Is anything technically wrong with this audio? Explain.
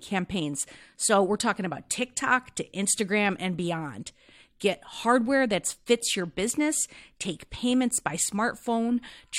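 No, nothing technically wrong can be heard here.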